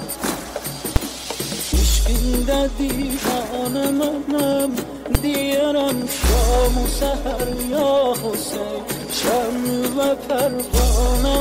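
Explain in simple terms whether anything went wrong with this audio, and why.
Two sharp bangs interrupt the sound, at 0.96 s and 5.15 s. Each is a fault called invalid numbers at full scale. A calculation broke and produced impossible values. The output jumped to a fixed extreme level, far beyond the normal sound, for about 5 ms, so short it sounds like one bang.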